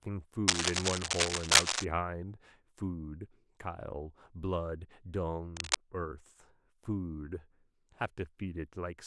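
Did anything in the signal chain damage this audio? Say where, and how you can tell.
Yes. The damage is in the analogue wiring. Cable scratch noise appears from 0.48 to 1.85 s and again from 5.56 to 5.76 s. Dense, uneven bursts of scratching sit over the speech, a few dB louder than it. The likely cause is a worn cable or connector being moved. Its contact resistance jumps about rapidly and injects crackle. The bursts are irregular and brief, which fits a loose contact rather than digital errors.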